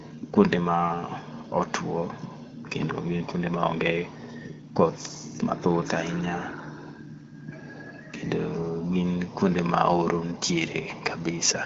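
No faults are audible.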